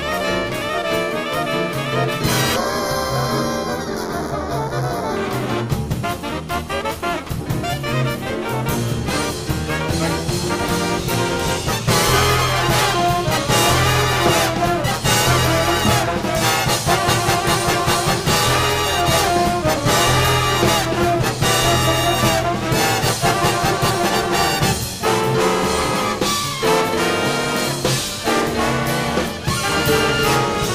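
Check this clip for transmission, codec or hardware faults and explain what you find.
One fault stands out: a channel delay causing comb filtering between 2.56 and 5.17 s. One channel arrives a fraction of a millisecond behind the other, around 0.2 ms, and when the two are folded to mono the shared content cancels at regularly spaced frequencies, the first near 3 kHz with further notches stacked above it. Across that stretch the sound turns hollow and phasey, with the upper range dulled by those fixed notches.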